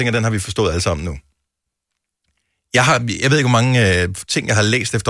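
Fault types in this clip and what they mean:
No audible faults anywhere in this speech recording.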